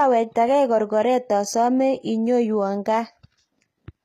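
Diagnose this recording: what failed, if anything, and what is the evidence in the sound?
The failure sits at the codec stage, and the damage is plainly audible throughout the speech. The treble still reaches fairly high, but the s sounds come out gritty and metallic, almost lispy. Nothing is present above about 14.9 kHz. This is likely HE-AAC compression at a low bitrate, around 20 kbps. Only the lower spectrum is truly coded. The highs are rebuilt by copying lower bands upward under a coarse envelope, so the harmonics no longer line up.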